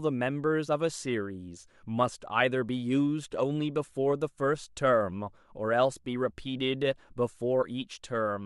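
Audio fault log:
No fault found in this speech clip.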